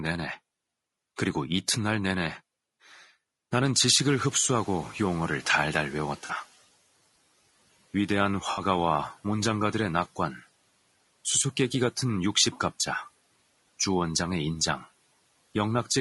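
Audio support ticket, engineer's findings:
Low-delay AAC compression, whole clip: rough, grainy speech, noise between harmonics, dull or synthetic-sounding top band. Codec damage plainly audible. Likely AAC-ELD at a low bitrate, and the sound fits roughly 32 kbps.

Noise suppressor catching up, 3.79 to 6.47 s: room noise jumps about 18 dB around 4 s and comes through under-reduced, then sinks over about 2.7 s as the noise estimate adapts, ending about 9 dB lower. The room noise itself is real, not a fault.

AAC frame loss with concealment, 6.25 to 6.31 s (40 ms) and 8.51 to 8.61 s (60 ms): short smeared, noisy patches where the decoder rebuilt audio from the last good spectrum. Lengths fit two and three lost frames.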